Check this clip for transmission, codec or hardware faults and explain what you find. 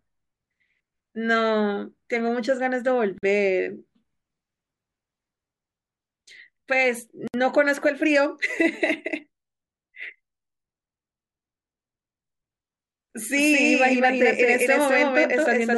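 Two kinds of fault are audible in this speech clip: short silent gaps at joins between separately encoded pieces, and a doubled audio track near the end.

Gap at a join of encoded pieces, at 3.18 to 3.23 s (48 ms) and 7.28 to 7.34 s (64 ms). The audio was encoded in sections and joined without trimming, so each join keeps the encoder's silent start-up delay and the padding of the previous section's last frame. Continuous speech drops out abruptly, with smeared edges, then resumes exactly where it stopped.

Doubled audio track, from 13.35 s to the end. A second full-band copy of the speech runs roughly a fifth of a second behind, about as loud as the original. It has no decay or room colour and begins abruptly. The likely cause is the same signal being captured a second time through a slower path. The result is a hard, echo-like repeat that blurs the last part of the clip.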